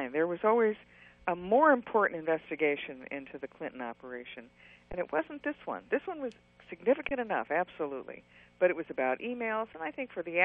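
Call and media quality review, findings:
Underrun with held sample at 4.92 s and 7.09 s. Gaps of about 15 ms and 20 ms. Output buffer ran dry, so the converter held its last value and the waveform went flat. Playback resumed where it paused, with nothing skipped, so re-entry is soft and near click-free.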